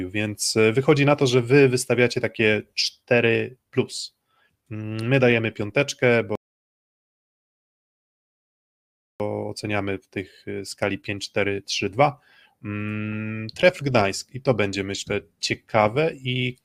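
At 6.35 s the speech cuts to silence until 9.2 s, a rebuffering stall: the player exhausted its downloaded audio and halted until more data arrived. Playback then resumes exactly where it stopped, so nothing is lost, but 2.85 s of dead air is added.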